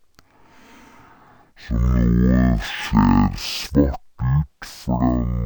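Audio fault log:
Throughout: stereo read as mono. Left and right samples are taken in turn as one channel, so the speech runs at half speed and a full octave (12 semitones) low. A spectrogram shows harmonics squeezed downward plus a fainter mirrored copy in the upper half.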